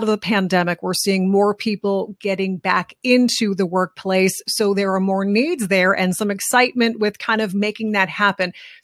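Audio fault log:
No faults detected: the speech signal holds steady with no audible technical problems anywhere in the recording.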